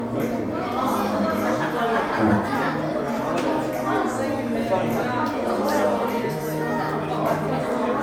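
Everyday sound showing generation loss throughout, likely from being encoded as MP3 around five times over, at a rate that fits 128 kbit/s. The repeated requantising has left it swirly, smeared and hollow, with blurred attacks and nothing above 20 kHz.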